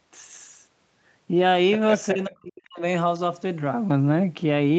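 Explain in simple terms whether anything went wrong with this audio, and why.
Two things went wrong in this speech.

From 2.13 to 2.83 s, the voice sinks almost to silence, for about 0.7 s. This is likely speech suppressed in double talk. When both sides of a call talk at once, the echo canceller has to tell this talker apart from the other person's voice coming back out of the loudspeaker. Here it could not, so it turned everything down. The talker was muted along with the echo.

At 3.9 s there is a short rough patch, just 20 ms long. One packet of audio was lost on the way. This is a lost packet rebuilt from error correction. The next packet carried a small, lower-quality backup copy of the missing piece, so the decoder played that instead. That's why you hear no gap. The moment just sounds grainier and noisier than the speech around it.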